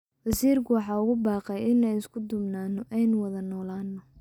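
No technical faults are audible.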